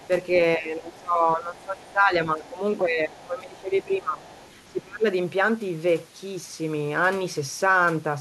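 From 0.00 to 0.07 s, and again from 4.22 to 4.71 s, the other side's voice leaks through, likely because the echo canceller left part of the loudspeaker signal in the microphone. It is a faint second voice, roughly 30 dB below the talker. After the first leak, from 0.57 to 2.61 s, from 2.81 to 4.24 s and from 4.68 to 5.07 s, the speech is suppressed in double talk. With both sides talking at once, the canceller likely turned the talker down along with the echo. The voice sinks by about 15, 20 and 25 dB in turn, dipping over those stretches.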